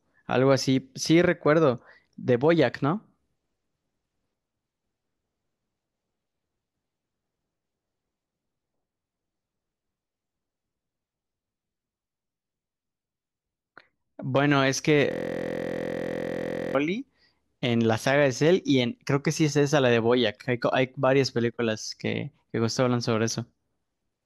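A steady 43.1 Hz buzz fills 15.12 to 16.75 s: a system hang loop, the frozen system replaying one 23.22 ms chunk, fitting a 1024-sample buffer.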